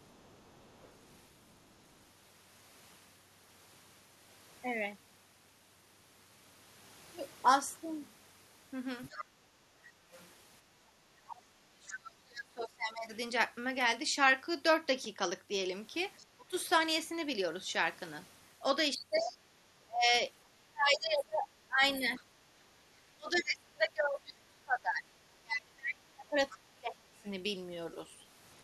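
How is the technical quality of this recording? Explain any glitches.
The recording has clear echo-cancellation problems on a speakerphone-style call: a second voice bleeds in repeatedly, the room tone dips once, and the main talker gets pushed down twice while both sides speak.

Other side's voice leaking through: A faint second voice sits under the speech from 0.0 to 1.86 s, at about 35 dB below the talker. It returns from 9.04 to 13.16 s at about 15 dB down, from 16.17 to 23.39 s at about 20 dB down, and from 26.5 to 27.3 s at about 25 dB down. The likely cause is the far end playing through the loudspeaker and reaching the microphone, with the echo canceller failing to subtract all of it.

Background gated by the echo canceller: Between 9.25 and 10.12 s the room noise drops by up to about 7 dB for roughly 0.7 s in total, then comes back. The canceller clamped the microphone while the loudspeaker was active, and the ambience went with it.

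Speech suppressed in double talk: From 11.1 to 13.11 s the talker's voice sinks, by as much as roughly 35 dB, across about 2 s. From 16.36 to 27.26 s it dips again for about 5 s, by up to roughly 25 dB. Both stretches overlap the leaking far-end voice. The likely cause is the canceller being unable to tell the local talker from the echo, so it attenuated both.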